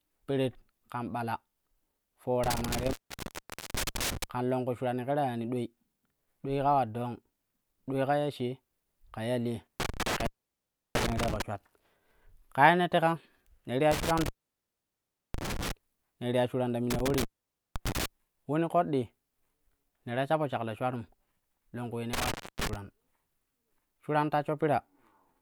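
Speech that drops out five times with crackle at each edge, leaving faint hiss: at 2.44–4.24, 9.80–11.42, 13.92–15.72 (after "teka ne ti"), 16.90–18.06 and 22.13–22.76 s. These are intermittent contact, a loose cable or plug opening for 0.3–1.1 s each.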